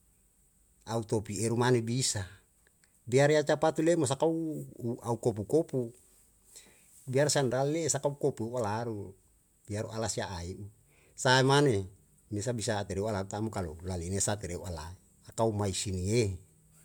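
Nothing technical to flag here: it's a speech recording, and no audible faults turn up anywhere in it.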